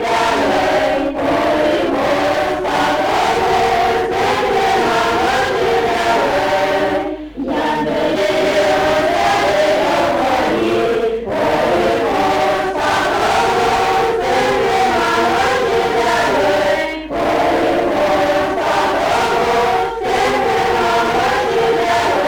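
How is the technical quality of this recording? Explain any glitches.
The recording has one persistent problem: a channel delay (doubling) running through the whole clip. One channel arrives about 93 ms late, which fits a 4096-sample buffer. When the channels are summed to mono, every sound gets an equal-level slap echo. A waveform shows each transient repeated 93 ms later, and a spectrogram shows onsets smeared into doubled edges.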